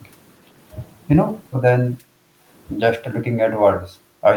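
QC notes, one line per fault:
2.0–2.5 s and 3.86–4.23 s, speech suppressed in double talk: the speech sinks by around 10 dB in the first stretch and nearer 15 dB in the second, the first lasting roughly half a second and the second about 0.4 s. The likely cause is an echo canceller treating overlapping far-end talk as echo and attenuating the whole signal. Unlike a packet dropout, the speech dips, thins or cuts out in pieces during overlapping talk, and unlike gain pumping, the dips follow overlapping talk rather than loud sounds.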